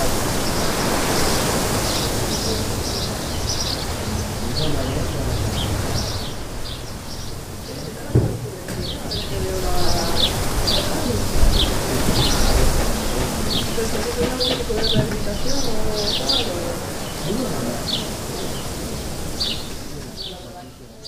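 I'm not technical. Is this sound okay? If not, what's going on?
Yes, nothing here sounds wrong to me.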